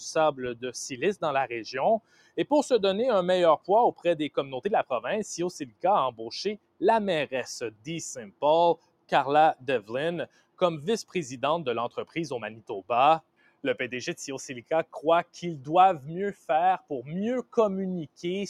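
Noise suppressor applied to music or sounds, throughout the clip: a suppressor tuned for speech stays active and treats sustained, steady content as background to be removed. It keeps pulling level down and letting it back up, so the loudness swings by around 10 dB. Onsets survive because they look unlike noise, but held material and decays sink behind them. The result pumps and flutters, with tails thinned and cut short.

Sound cut by the noise suppressor at 2.0–2.37 s, 3.58–4.05 s, 5.66–11.15 s, 12.06–13.64 s, 14.63–15.36 s and 16.34–18.2 s: in these stretches the suppressor goes further and classifies parts of the sound itself as noise, dropping them by about 17 to 18 dB at the deepest. Within each span only some fractions are hit, roughly one and a half seconds' worth across the long 5.66–11.15 s stretch, so sustained portions briefly sink while sharper attacks still come through.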